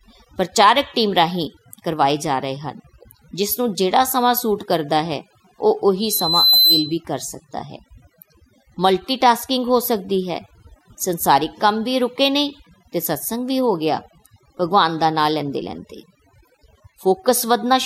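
Overdone noise removal runs through the whole clip. The noise reduction is set too strong, so any frequency band that sits close to the estimated noise floor is pulled far down or shut off. Quiet parts of the speech fall below that threshold and are cut along with the noise. The background collapses into near silence dotted with twinkling specks.

A loudspeaker feedback squeal runs from 6.00 to 6.96 s. The microphone is picking up the loudspeaker it drives, and at 4 kHz the loop gain rises above one, so that frequency keeps feeding itself on each pass. The tone swells over roughly half a second into a squeal, rising to around 5 dB above the speech before it stops.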